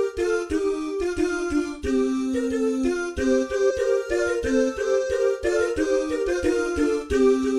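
At 3.69 to 3.71 s, compressed frames are skipped: the decoder never plays a short run of frames, probably missing or rejected as damaged. The sound jumps ahead around 70 ms, which fits about three 23.2 ms frames.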